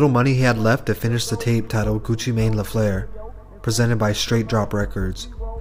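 No technical faults can be heard anywhere in the clip.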